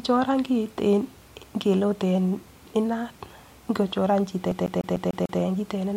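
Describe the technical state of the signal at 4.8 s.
At 4.8 s the speech is caught in a CD stuck on one turn (4.51–5.40 s): a 148 ms slice repeats six times, showing identical waveform blocks separated by brief silent gaps.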